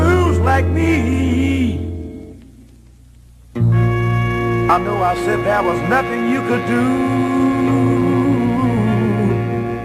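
Nothing stood out as technically wrong on listening to this audio.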